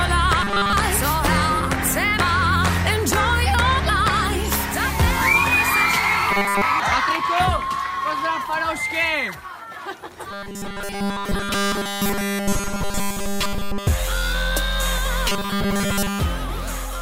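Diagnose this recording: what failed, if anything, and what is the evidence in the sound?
A rigid, metallic 200 Hz buzz replaces the natural texture of the sound at 0.42–0.73 s, 6.31–6.62 s, 10.31–13.87 s and 15.29–16.20 s, still tracking the overall shape of the audio. This is robotic sound from repeated short buffers, likely at the driver or buffer stage: new audio arrived too seldom, so a 5 ms slice was looped to fill the gaps while fresh material was skipped, with almost everything in those spans repeated.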